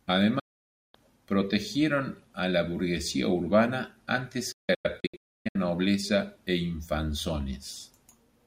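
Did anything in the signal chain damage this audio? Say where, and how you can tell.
Yes, a digital broadcast dropout at the receiver. At 0.39–0.95 s, before "protegieron a la burguesía", the sound fades to silence in about 8 ms. At 4.52–5.56 s, between "la burguesía urbana antes" and "nobleza e", there are scattered holes, the longest 0.29 s. The receiver muted the failed frames, which shows as flat waveform gaps and full-band blank columns on a spectrogram.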